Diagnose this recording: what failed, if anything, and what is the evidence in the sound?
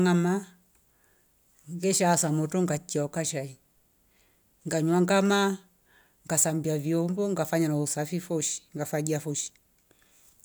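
Nothing failed here; the sound gives no evidence of a fault in any stage of the recording.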